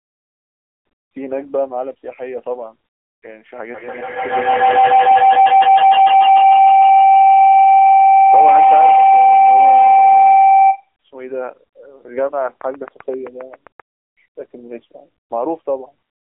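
AMR narrowband mobile codec damage runs throughout: nothing passes above 3.6 kHz, the band is held to roughly 300 Hz to 3.4 kHz, and the sparse pulse-driven vocal-tract model makes the speech plainly buzzy and synthetic, which fits a low mode near 7.95 kbps.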